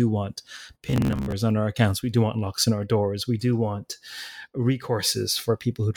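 Speech, with a stretch of robotic sound from repeated short buffers between 0.87 and 1.32 s, ending just before "on our accounts". There the voice collapses into a stiff, metallic buzz near 67 Hz that still roughly tracks the phrasing. The likely cause is audio arriving too slowly, so a segment of about 15 ms is looped to fill the gaps and about half the real audio is skipped. A waveform would show identical 15 ms cycles, and a spectrogram would show evenly spaced horizontal harmonic lines at multiples of 67 Hz.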